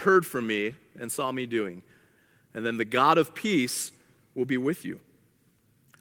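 No technical faults can be heard anywhere in the speech recording, and the signal stays steady and continuous throughout.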